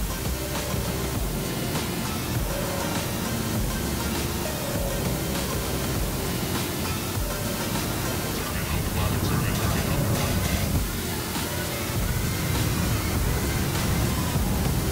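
A steady, even hiss sits under the audio for its whole length. This is low bit depth with dither. Noise was added before coarse rounding, turning the error into white noise about 10 dB below the signal. No distortion is heard. The level points to about 4 bits.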